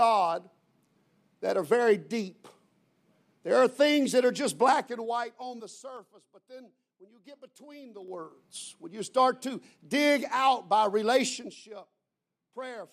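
Zipper noise at 4.78–6.14 s, 7.94–8.36 s and 11.26–11.61 s: the level moves in unsmoothed 3 dB jumps, roughly 20 dB down, then up, then about 15 dB down, and each jump clicks, giving slow ticking at first and a faster zipping later.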